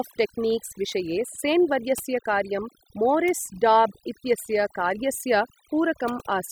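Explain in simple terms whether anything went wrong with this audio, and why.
From start to finish, the pauses between words fall to near silence sprinkled with twinkling specks. That is overdone noise removal: a noise reduction tool set too strongly shut down frequency bands it judged to be noise, and the quieter parts of the voice went with them.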